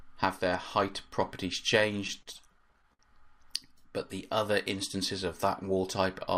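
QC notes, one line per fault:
2.07–3.01 s, repeated stalls (stutter): the jitter buffer kept running dry as packets arrived late, so the receiver held the last sound over seven short gaps, the longest 59 ms. That adds about 139 ms in total and loses nothing, but the passage drags and judders.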